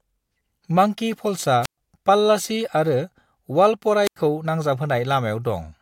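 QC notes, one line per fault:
1.62–1.78 s and 4.04–4.16 s, wireless microphone squelch dropout: the analogue FM microphone's radio signal fades, so the receiver's squelch gate shuts the output, leaving holes of near silence of about 122 ms and then 88 ms before the sound returns. The weakening carrier before the mute sets it apart from a digital packet dropout, which cuts out abruptly with no fade-related lead-in.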